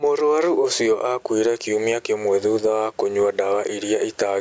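Gain pumping runs through the whole clip. The gain swings by about 15 dB, likely from excessive gain hitting a fast limiter.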